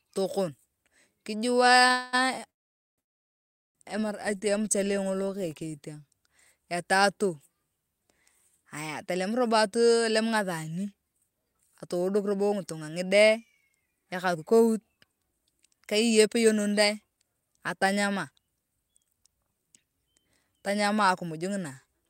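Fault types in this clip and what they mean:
Call audio freeze: Packets were likely held up in transit, so the jitter buffer ran dry. At 1.92 to 2.15 s a fading fill bridges about 0.21 s. From 2.50 to 3.77 s two back-to-back stalls of 0.48 s and 0.75 s go almost fully silent, then the speech resumes intact.
Jitter buffer slow-down: With the buffer running low, the receiver repeated single pitch periods to rebuild its reserve. From 4.31 to 4.63 s the speech plays at about 89% speed with unchanged pitch, drawing sounds out by roughly 39 ms in total.
Jitter buffer speed-up: The buffer held more audio than its target, so the receiver trimmed short pitch-period slices again and again to cut the delay. Between 10.34 and 19.29 s the speech runs at about 110% speed at unchanged pitch, sounding hurried, with around a second removed overall.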